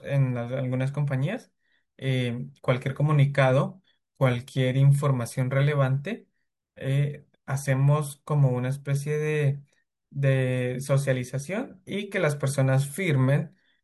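No technical faults are audible.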